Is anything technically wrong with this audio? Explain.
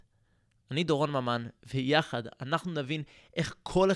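No, the speech signal is technically intact, with nothing audibly faulty anywhere in the recording.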